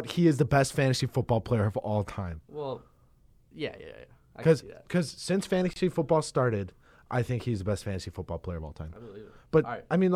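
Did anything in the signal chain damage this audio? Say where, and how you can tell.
Yes, at the codec stage: a gap at a join of encoded pieces opens at 5.73 s and runs to 5.76 s, about 27 ms of silence with smeared edges. The two separately encoded segments were butted together with encoder start delay and last-frame padding left untrimmed.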